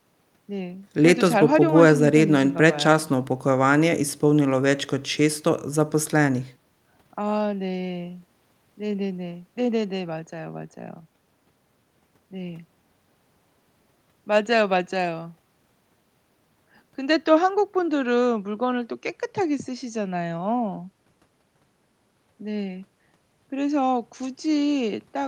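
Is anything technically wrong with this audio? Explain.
No, nothing is technically wrong.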